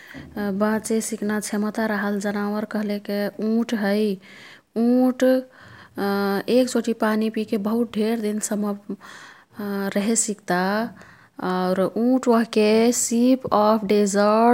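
No technical faults can be heard anywhere in the recording.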